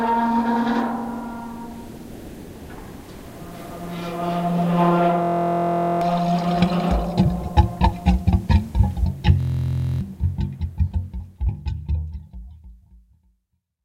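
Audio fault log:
5.22 to 6.01 s, system hang loop: the system stalled while the output hardware kept replaying the same 23.22 ms stretch of its ring buffer, which fits a 1024-sample buffer. The stretch repeats 34 times at 43.1 Hz, so it is heard as a steady buzz rather than a stutter. Roughly 0.7 s of audio is lost.
9.40 to 10.01 s, system hang loop: the same 23.22 ms loop recurs 26 times, again a 43.1 Hz buzz, with roughly 0.7 s of audio lost.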